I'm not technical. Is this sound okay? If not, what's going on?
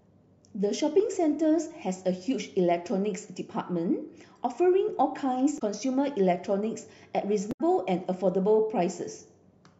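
No. Damaged data in a compressed stream at 5.55–5.62 s and 7.49–7.61 s: corrupted bytes make the decoder lose its place, producing brief glitches in the speech.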